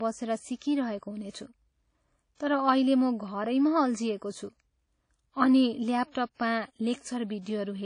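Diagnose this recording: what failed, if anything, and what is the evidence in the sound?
Codec stage: the speech has a washy, ringing quality and a hiss that swells and fades with each phrase, consistent with likely WMA compression at a low bitrate near 32 kbps. On a spectrogram, everything stops at 10.1 kHz, and weak components appear as patchy holes smeared across long transform blocks.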